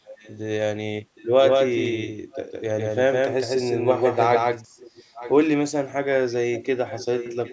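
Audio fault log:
0.05–0.38 s, 2.31–2.42 s, 4.78–5.33 s, 6.52–6.64 s and 6.85 s to the end, echo leak: a delayed copy of the speech trails about 0.76 s behind in short scraps. The first one is quiet, around 25 dB down, and the rest are louder, about 15 dB below the speech. The likely cause is a far end on a loudspeaker whose echo canceller let some of its mic pickup slip back down the line.
1.39–4.65 s, doubled audio track: for this stretch there's a second full-band copy of the speech, roughly as loud as the original and trailing by something like 150 ms. It sounds flat and dry, with no room tail, and it cuts in and out abruptly at both ends. The likely cause is the same audio being captured again through a slower path, or an edit leaving two copies out of step.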